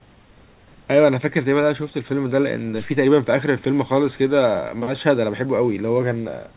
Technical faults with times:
none

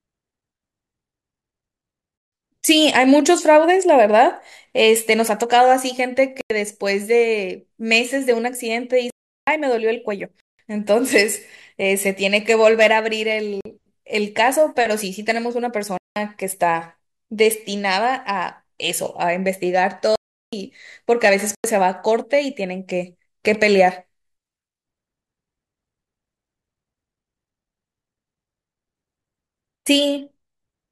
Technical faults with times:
2.18-2.32 block of digital silence
6.41-6.50 block of digital silence
9.10-9.47 block of digital silence
10.40-10.59 block of digital silence
13.61-13.65 block of digital silence
15.98-16.16 block of digital silence
20.15-20.53 block of digital silence
21.55-21.64 block of digital silence

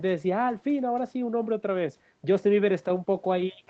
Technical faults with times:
none

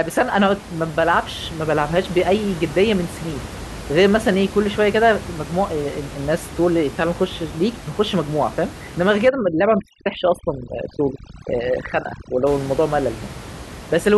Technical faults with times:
9.28-12.47 overdone noise removal

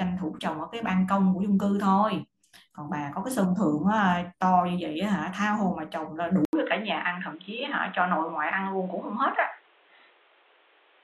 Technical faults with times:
6.45-11.03 input switched to a poorer device

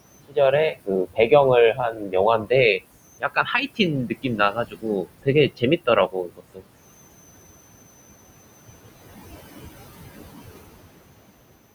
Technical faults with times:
0.00-11.74 converter idle tones
0.00-11.74 noise suppressor artifacts
0.28-0.37 speech cut by the noise suppressor
0.71-1.32 speech cut by the noise suppressor
1.73-2.84 speech cut by the noise suppressor
3.20-6.67 speech cut by the noise suppressor

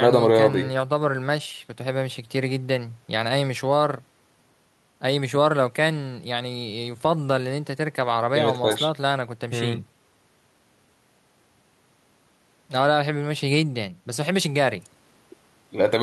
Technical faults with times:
none

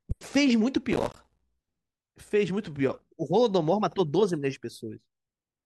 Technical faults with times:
0.92-1.42 processor overload crackle

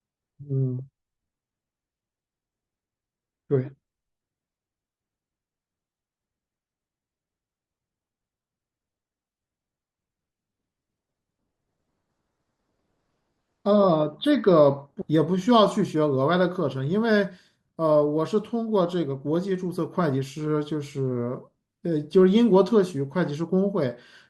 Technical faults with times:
15.01-15.06 stream segment skipped

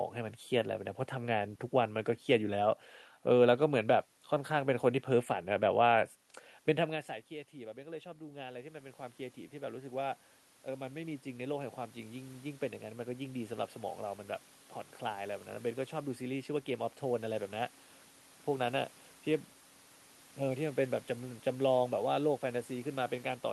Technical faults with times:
6.86-13.50 automatic gain rising

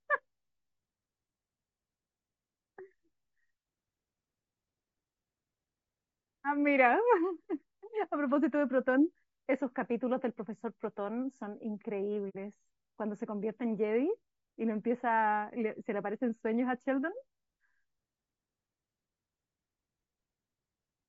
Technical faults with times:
0.00-21.09 low-delay AAC compression
12.29-12.36 AAC frame loss with muting

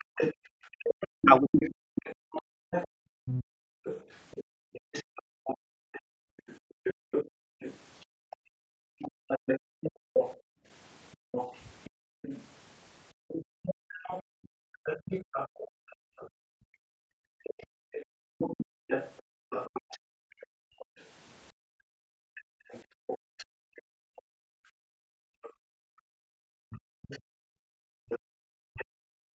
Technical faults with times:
0.00-20.85 other side's voice leaking through
1.23-1.52 speech suppressed in double talk
1.80-18.16 background gated by the echo canceller
20.11-29.35 background gated by the echo canceller
22.36-28.85 other side's voice leaking through

